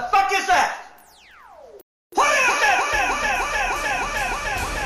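The audio cuts out abruptly at 1.81 s and stays silent until 2.12 s, a playback stall lasting about 311 ms. The likely cause is the player starving for data or having its output thread blocked, so nothing reached the output until it recovered. A stall differs from a brief dropout: a dropout leaves a gap of a few milliseconds, whereas here the sound halts mid-flow for a clearly audible third of a second.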